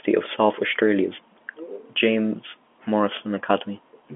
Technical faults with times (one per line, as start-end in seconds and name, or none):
none